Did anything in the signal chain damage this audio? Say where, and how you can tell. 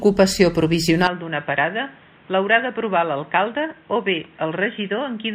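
Yes. An input switched to a poorer device at 1.07 s, and the speech stays that way to the end. With no gap at the changeover, the sound turns dull and boxy, losing everything above 3.8 kHz. The level falls by roughly 10 dB, and a new background noise sits roughly 30 dB under the speech. The stage is likely the capture device or driver, with the system handing recording over to a narrower-band microphone path.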